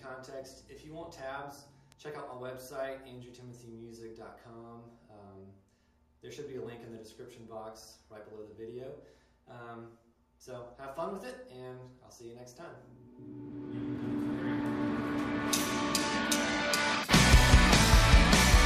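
At 1.92 s a bit error spike appears. A flipped bit throws three consecutive samples off by a power of two. It sounds like one sharp tick, about -32 dBFS.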